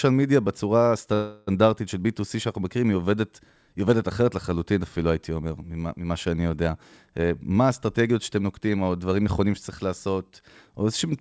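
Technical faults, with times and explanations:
1.14 to 1.49 s, call audio freeze: for about a third of a second the speech stops moving forward and the last sound is held as a buzzy or hissy, fading continuation, with no drop to true silence. The likely cause is packets stalling in transit until the jitter buffer ran dry, so the receiver filled the wait. When the audio resumes, it picks up exactly where it stopped. Unlike a dropout, nothing is lost; the stretch is inserted, and everything after it arrives 332 ms later.
7.18 to 10.31 s, jitter buffer speed-up: over about three seconds the speech runs roughly 10 percent fast, sounding hurried while its pitch stays where it was. After a backlog built up in the buffer, the receiver trimmed many tiny slices, each one or a few pitch periods long, to shed about 0.3 s of delay. A tape-style speed change would raise the pitch along with the pace. 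Here the pitch holds, and the band still stops at 8 kHz as the G.722 path leaves it.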